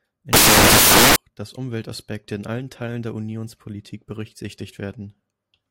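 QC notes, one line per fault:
0.33–1.16 s, samples built from the wrong bytes: the speech turns into loud white noise because each sample's bytes were assembled wrongly, so the jittery low bits now form most of every value. The waveform fills out densely and the spectrogram shows flat broadband noise.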